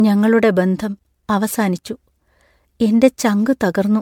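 The speech has most likely been through repeated MP3 decoding and re-encoding, around five passes, which fits a 96 kbit/s chain. This is generation loss, and it lasts the whole clip. Each pass quantises the signal again on a shifted frame grid, so noise and spectral gaps pile up. The speech sounds swirly, smeared and hollow, worse than one encode at that rate would leave it, and attacks are blurred. Content extends up to 20 kHz.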